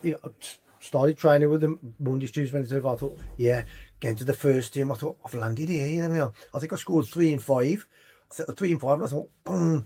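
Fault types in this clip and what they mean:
Scattered short gaps: Between 5.23 and 6.15 s, about seven tiny holes occur, none longer than roughly 10 ms. Each was patched by continuing the preceding sound. Together they cover around 70 ms. They are heard as brief ticks and smears.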